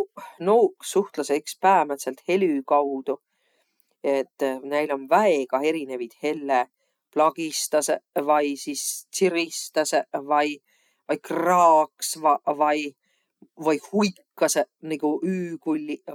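No technical faults are audible anywhere in the speech.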